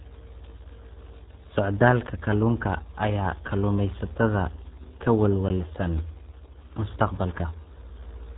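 It's a speech clip, and the whole thing has gone through the RealAudio 14.4 codec, the old dial-up era RealAudio 1 coder. The damage is heavy and constant from start to finish. Everything above about 3.8 kHz is simply gone, so the voice sounds boxed-in and muffled, with that gargly, bubbling texture on top. The coarseness points to a bitrate down around 8 kbit/s, squeezed hard enough to fit a 14.4 modem line.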